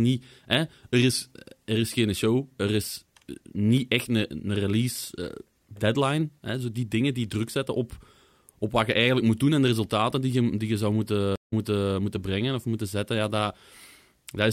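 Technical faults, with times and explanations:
11.36–11.94 s, stream reconnect: the speech drops out for about 165 ms, then comes back softly and picks up about 0.42 s earlier than where it broke off, so a short stretch is heard twice. The connection failed, the player went quiet while it reconnected, and the server resent a burst of recent audio. A fresh decoder started mid-stream, so its first frame or two fade in rather than arriving at full level.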